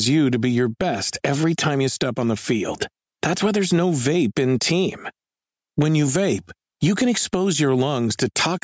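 Gain pumping runs through the whole clip, with the gain swinging by something like 15 dB. The likely cause is input gain set far too high for the microphone, with a fast limiter or compressor clamping down on every peak and releasing in the pauses. Loud and quiet passages end up squeezed close together in level, giving a breathing, squashed sound, heard through call-style processing that carries nothing above 8 kHz.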